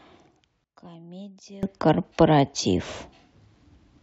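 From 0.64 to 1.63 s the speech suddenly drops by about 22 dB to a faint copy of itself, before returning at full strength. The likely cause is one channel inverted: with one side's polarity reversed, the material shared by both channels cancels in the mono sum, leaving only their faint difference. A plain gain drop or dropout would keep the tone or leave silence. This leaves a weak residue.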